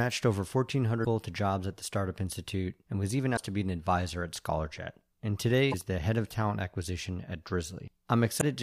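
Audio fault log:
1.01–1.06 s, 3.33–3.39 s, 5.68–5.74 s, 8.37–8.43 s: damaged data in a compressed stream. Four short garbled blips of about 50 to 60 ms break the speech: just before "to jobs at the", between "and was even" and "to be an advisor", just before "the head of talent", and near the end. Corrupted bytes make the decoder misread those frames and lose sync until it locks onto a valid frame header, producing the brief disruption.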